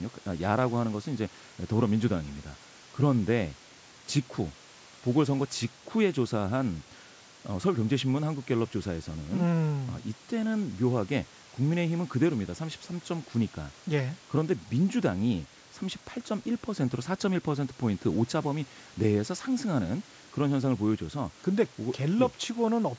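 The clip is speech, and nothing in it is technically wrong.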